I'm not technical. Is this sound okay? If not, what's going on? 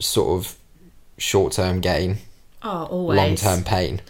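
Yes, this speech recording is technically sound, with nothing wrong to be heard anywhere in it.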